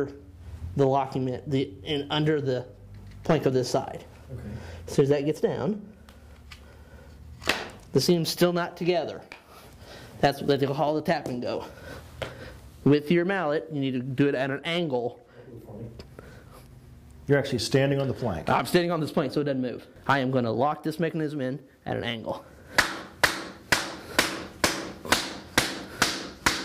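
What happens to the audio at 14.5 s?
At 14.5 s the audio falls inside a drift correction step running from 13.96 to 14.61 s, most likely from clock-matching software that suddenly slowed playback to rebalance its buffer. For those 0.65 s everything runs 6% slow and drops 107 cents, just over a semitone, so the sound sags flat and sluggish. It then snaps back to normal speed and pitch at 14.61 s.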